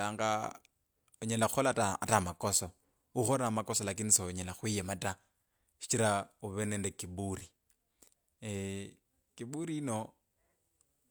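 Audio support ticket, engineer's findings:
No technical faults heard anywhere in the speech audio.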